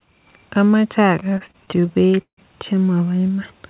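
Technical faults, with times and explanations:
1.2–2.39 s, repeated stalls (stutter): packets arrived late, so the jitter buffer ran empty about twenty times. Each time the receiver stretched the last sound until audio resumed, fading it in longer waits, the longest about 156 ms. Roughly 0.37 s, a third of the span, is filled this way. Nothing is lost, but the speech drags and stammers. On a spectrogram, flat smeared bands repeat the preceding spectrum below the call codec's 4 kHz ceiling. The waveform shows repeated, decaying copies of one pattern.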